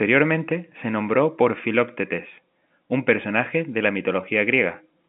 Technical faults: none

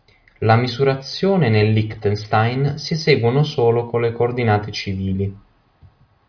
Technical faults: none

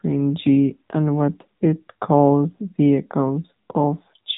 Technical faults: AMR narrowband mobile codec

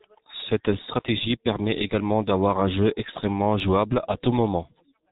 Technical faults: G.723.1 codec

